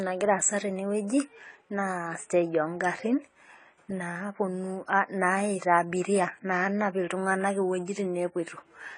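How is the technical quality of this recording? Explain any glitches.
The recording's quality is held back by lossy coding for its full length. Throughout the speech, nothing is heard above 10 kHz. The sound is dull and smeared, with a fizzy, warbling edge on sibilants. The likely cause is AAC compression, which fits a low-bitrate AAC-LC stream of 24 kbps. The encoder drops the top band and quantises the remaining frequencies coarsely, so fine detail breaks up.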